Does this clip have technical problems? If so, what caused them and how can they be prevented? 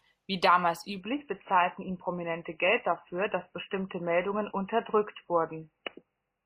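Yes. From 1.01 s to the end, the adaptive stream dropped to a lower bitrate, consistent with MP3 falling from 128 to 16 kbit/s. The speech suddenly loses everything above 3 kHz and turns dull and artefact-laden, with no gap. A larger playback buffer and a higher minimum bitrate would keep a slowed connection from forcing this switch.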